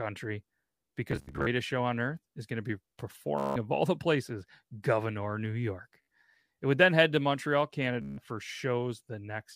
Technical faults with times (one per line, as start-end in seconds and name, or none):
1.11-1.46 Bluetooth stutter
3.38-3.56 Bluetooth stutter
6.02-6.08 Bluetooth stutter
8.02-8.18 Bluetooth stutter